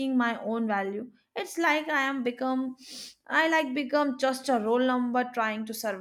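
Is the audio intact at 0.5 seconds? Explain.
Yes, the speech at 0.5 seconds plays through cleanly, with no dropout, click, distortion or other fault at that moment.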